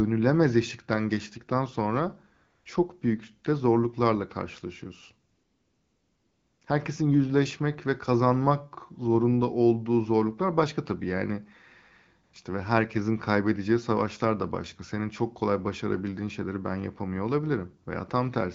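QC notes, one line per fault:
2.35–2.65 s, 5.31–6.61 s and 12.23–12.33 s, AMR comfort noise: the phone's silence detection treated the talker as quiet and stopped sending speech frames for about 0.3 s, 1.3 s and 0.1 s, after "eşikten geçtikten sonra", after "büyük de zorluklarla karşılaşıyorsun", and before "işte ve herkesin kaybedeceği". The receiver filled each gap with synthetic noise built from a rough level and spectral outline, so the real background gives way to a smooth, steady hiss that switches in and out at the gap edges.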